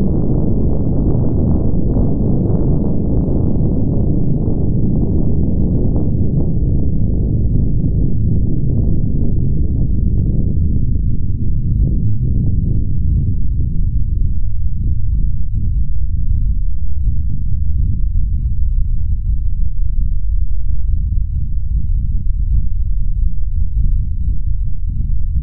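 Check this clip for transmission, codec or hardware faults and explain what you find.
Nothing stood out on listening; no transmission, codec or hardware problem is audible anywhere in the recording.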